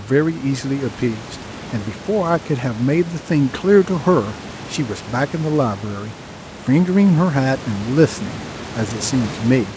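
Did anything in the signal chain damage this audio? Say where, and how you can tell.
No, nothing stood out on listening that would point to damage anywhere in the signal chain.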